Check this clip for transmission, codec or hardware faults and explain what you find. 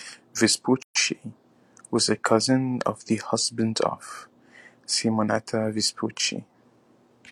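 One codec fault is present, a gap at a join of encoded pieces. From 0.82 to 0.95 s a gap of about 130 ms opens in the speech. Two separately encoded segments were joined without trimming the encoder's start delay and final-frame padding. The gap has smeared edges, so the silent part is shorter than the gap, and the speech then resumes where it stopped.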